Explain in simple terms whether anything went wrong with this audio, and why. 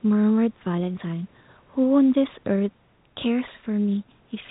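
Nothing went wrong here: the speech comes through as an ordinary telephone recording, where the phone-line format leaves out the very highest sounds and some faint room noise sits well beneath the speech, and both of those are normal for this kind of recording, not faults.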